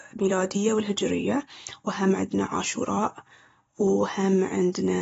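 From start to finish the speech sounds dull and smeared, with a warbling, fizzy texture on sibilants and held sounds. The likely cause is AAC compression at a low bitrate, consistent with AAC-LC near 24 kbps: the encoder drops high frequencies and quantises the rest coarsely. On a spectrogram, energy stops sharply at 7.6 kHz. The waveform shows no obvious sign of this fault.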